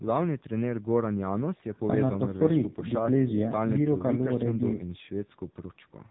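Throughout, an AMR narrowband mobile codec at heavy compression, which fits roughly 6.7 kbps, strips everything above 3.8 kHz, leaving the voice muffled, buzzy and synthetic.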